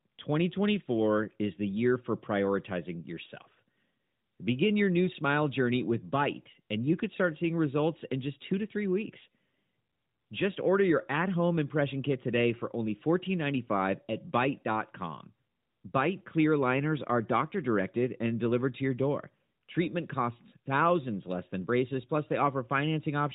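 Nothing goes wrong anywhere in this recording, so there's no fault to point to.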